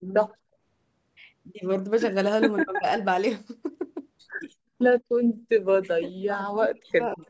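The speech dips briefly from 2.64 to 2.86 s, then cuts out almost completely in pieces from 5.83 s to the end. This is likely speech suppressed in double talk by an echo canceller.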